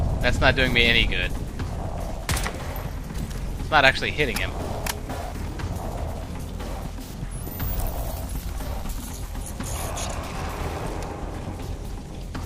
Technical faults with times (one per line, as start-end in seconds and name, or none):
none